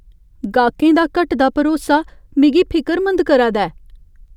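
From 0.44 s to 4.28 s the speech carries word clock ticks: about seven short, sharp clicks spaced roughly half a second apart. The receiving device is running on its own clock rather than locking to the digital source, with a mismatch of around 40 ppm. Each time the two clocks drift a full sample apart, a single sample is dropped or repeated, and that discontinuity in the waveform is heard as a tick.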